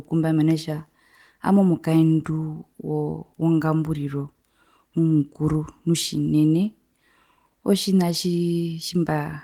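No technical faults can be heard anywhere in this recording.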